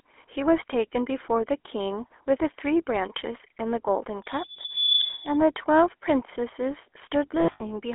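Speech runs through the GSM full-rate codec for its whole length, which fits a 13 kbit/s mobile link. The band is held to roughly 300 Hz to 3.4 kHz, so the sound is thin and nothing is heard above that. The codec damage is plainly audible as a buzzy, gravelly roughness. The coder rebuilds the vocal tract from a filter model and drives it with a coarse pulse train, keeping only part of the excitation, and that sparse excitation causes the grit. From 4.23 to 5.39 s a loudspeaker feedback squeal appears: a single tone at 3.5 kHz swells over roughly 0.7 s and peaks at about 10 dB above the speech. A microphone is picking up the loudspeaker it feeds, and at 3.5 kHz the loop gain has gone above one. The tone keeps reinforcing itself until it is limited or the loop is broken, and it stops at 5.39 s. Lost GSM frames follow between 7.40 and 7.63 s. About 160 ms of audio is missing, scattered over a 200 ms span, which points to around eight lost 20 ms frames, with the longest gap at roughly 70 ms. 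Each gap is filled by repeating the last good frame's parameters, so the sound is held as a rough metallic ring instead of cutting to clean silence.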